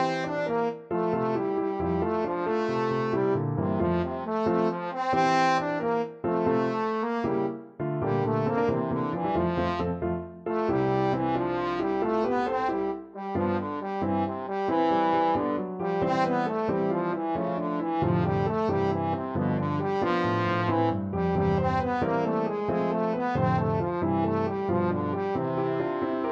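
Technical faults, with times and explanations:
Nothing stood out as a technical fault on listening.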